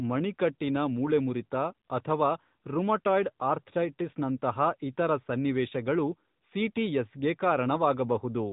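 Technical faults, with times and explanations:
Throughout: AMR narrowband mobile codec. Everything above 4 kHz is gone, so the speech sounds boxed-in and phone-like, with a clearly audible buzzy, synthetic edge from the vocal-tract model and sparse pulse excitation. That damage points to a mid-rate mode around 10 kbps.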